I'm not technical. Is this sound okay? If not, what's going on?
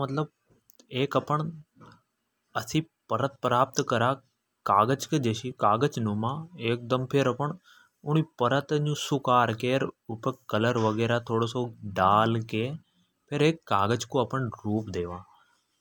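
Yes, it's fine: nothing here sounds broken, cut off or glitchy, so there's nothing to worry about.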